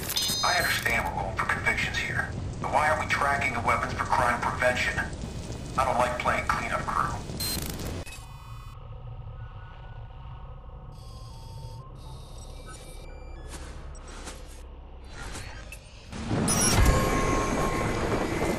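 From 5.23 to 8.74 s a faint buzzing chirp, pulsing at roughly 500 per second and sitting around 30 dB below the sound, is computer activity noise: processor or graphics load disturbing the shared ground. Unlike steady mains hum, it starts and stops abruptly, independent of the audio.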